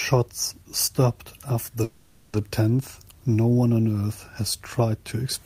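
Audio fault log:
1.83 to 2.35 s, long network dropout: the speech turns into a smeared buzz that drags out the last sound for about half a second, with no gap of silence. Speech then resumes with that half second missing, likely because incoming audio stopped and the receiver filled the gap.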